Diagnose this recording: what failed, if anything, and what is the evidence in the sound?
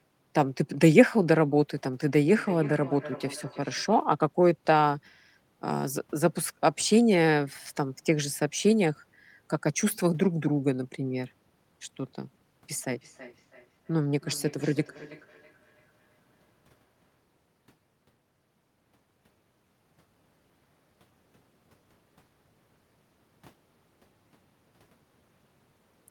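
Call processing: feedback echo between two devices. From 2.33 to 4.08 s and from 12.96 to 17.2 s, speech recurs roughly every 300 ms, peaking about 16 and about 23 dB below it. Another device replays this microphone, which recaptures it, and each echo canceller removes only its own playback.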